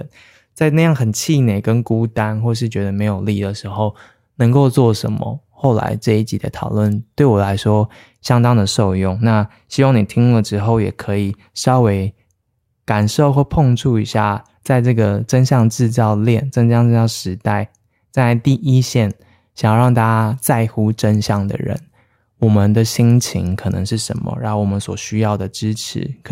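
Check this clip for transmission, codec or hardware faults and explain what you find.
Nothing faulty can be heard anywhere in the recording.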